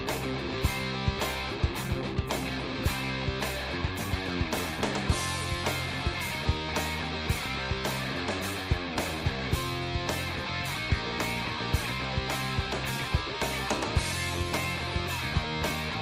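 No technical faults are audible anywhere in the recording.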